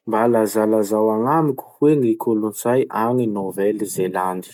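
No technical faults are audible.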